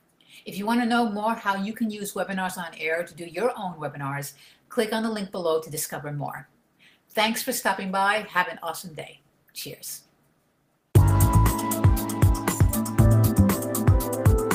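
Nothing is technically wrong with the clip; no faults can be heard at any point.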